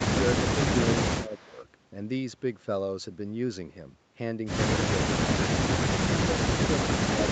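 From 1.26 to 1.57 s the speech sags by roughly 5 dB for about 300 ms, a shallow dip rather than a dropout. This is speech suppressed in double talk, likely caused by an echo canceller that heard both sides at once and turned its own talker down along with the loudspeaker echo. Unlike a network gap, the sound stays continuous and only dips. Unlike gain riding, the dip is tied to that overlap and recovers right after it.

Starting at 1.27 s and running to 1.64 s, a faint copy of the speech trails the original by 313 ms, sitting very low, around 30 dB below it. This is an echo leak, likely from a loudspeaker on one side whose echo canceller let some of its microphone pickup pass back into the call. The fixed 313 ms lag sets it apart from room reverberation, which would smear continuously instead of repeating as a distinct, delayed copy. The audio carries nothing above 8 kHz, which fits a wideband call codec.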